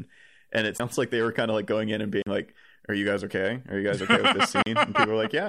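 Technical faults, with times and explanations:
0.78 s, 2.22–2.27 s and 4.63–4.66 s, Bluetooth stall: the speech drops to brief silences of 16, 43 and 37 ms, then resumes, likely as the headphone buffer ran dry awaiting resent packets.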